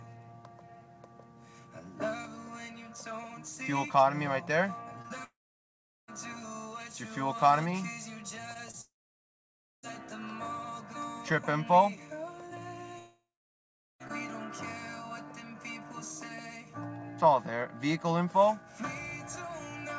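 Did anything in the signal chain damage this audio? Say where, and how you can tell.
Yes, the network stage damaged it, in two ways. The sound arrives band-limited to nothing above 8 kHz, consistent with a G.722 call path.

Short concealed packet loss occurs at 5.02–5.06, 5.08–5.12, 8.54–8.57 and 8.71–8.75 s. Each time, about 20 ms of audio is missing, and the receiver extends the preceding sound before blending back, which leaves a brief smear or wobble. Unlike a buffer underrun, there is no hard click or abrupt gap. The hole is papered over with plausible continuation.

Long network dropouts span 5.24–6.10, 8.81–9.85 and 12.99–14.02 s. In each, the last sound carries on briefly as a fading buzz or hiss, then gives way to silence or low steady noise for roughly three quarters of a second to nearly a second. The audio then resumes further on with the missing stretch simply gone. The cause is likely a network outage rather than a recording gap. 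The tell is the short synthetic tail before the silence and the fact that playback skips ahead instead of picking up where it left off.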